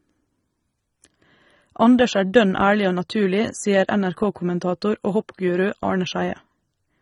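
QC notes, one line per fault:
throughout AAC compression. The speech sounds dull and smeared, with fizzy sibilants. This is likely AAC-LC encoding that fits about 24 kbps, starving the upper spectrum.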